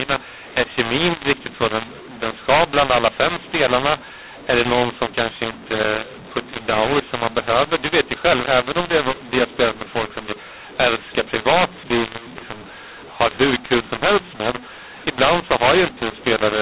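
Harsh, gritty distortion runs through the whole of this speech recording: loud passages crunch and swell unevenly, quiet syllables jump out of proportion, and the pauses between phrases fill with a hiss instead of falling silent. This is a mu-law and A-law mix-up. The telephone audio was encoded with A-law but decoded as mu-law, so each 8-bit code maps to the wrong level on the logarithmic curve, scrambling amplitudes and lifting near-silent samples well above zero. The dull, band-limited telephone tone fits 8 kHz G.711 sampling.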